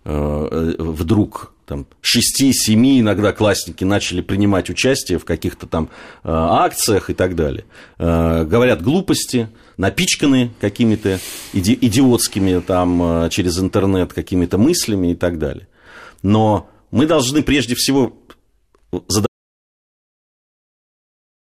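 An audio dropout to silence begins at 19.27 s and runs to the end of the speech, about 2.3 s of dead air. The speech stops abruptly mid-flow, and what follows is plain silence with no room tone or hiss underneath it. The input was likely lost, through a disconnected device, a failed link or an accidental mute, while recording carried on writing silence, so whatever was spoken afterwards is gone.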